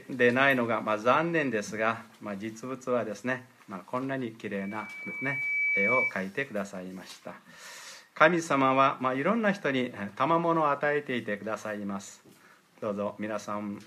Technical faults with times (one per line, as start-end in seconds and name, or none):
4.57-6.14 loudspeaker feedback squeal